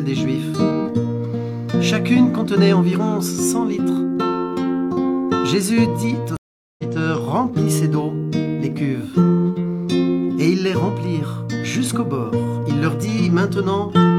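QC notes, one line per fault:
6.37–6.83 s: stream reconnect. The connection dropped, leaving about 0.42 s of silence, then a fresh decoder resumed the sound roughly 0.2 s further on.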